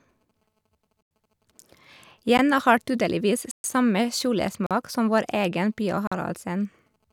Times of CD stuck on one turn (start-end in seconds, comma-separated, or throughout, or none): none